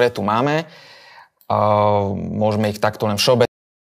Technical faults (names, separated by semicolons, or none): cut-off end